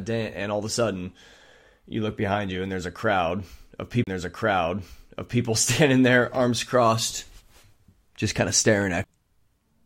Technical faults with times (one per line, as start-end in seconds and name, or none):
4.04-4.07 CD skip
9.04 CD skip